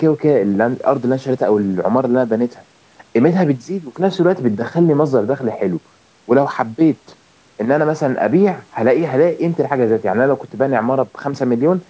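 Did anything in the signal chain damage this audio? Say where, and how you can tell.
No, the speech carries nothing above 8 kHz, the band limit you'd expect from a call's microphone processing and a wideband codec such as G.722, and no stage of the chain has damaged the signal.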